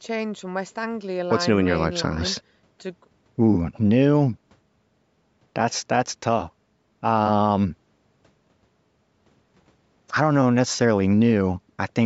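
Nothing stood out on listening to this speech, which has passed through a call's microphone processing that trims the lowest bass and leaves nothing above 8 kHz, as such a path normally does.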